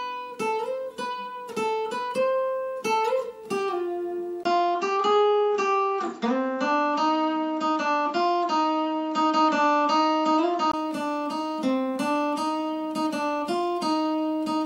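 At 4.43 s the audio goes duller and boxier, after a 20 ms gap, until 10.74 s, likely from an input switched to a poorer device. A spectrogram shows everything above 7.6 kHz cut off, with a faint new noise floor, and the waveform steps by a few decibels.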